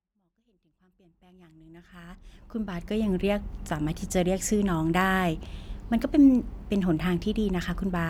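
No technical faults occur in this speech clip; it simply fades in smoothly from the start until about 3.1 s.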